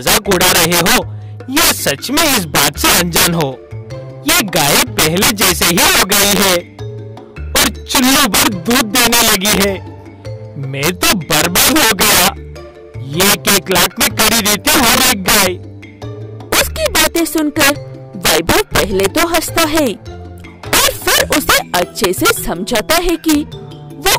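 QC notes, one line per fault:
throughout, integer overflow: violent, sharp cracks burst out on the peaks, far harsher than clipping. The level is pushed about 11 dB past full scale, and the roughly 7% of samples over the limit wrap around instead of limiting, each one flipping instantly to the opposite extreme.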